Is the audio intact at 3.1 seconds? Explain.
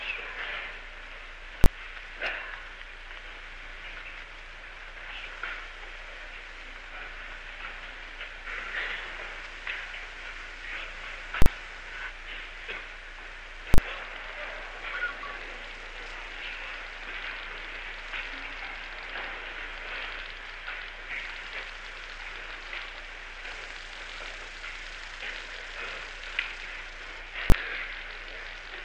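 Yes, the audio at 3.1 seconds is intact, with no dropout, click, distortion or other fault at that moment.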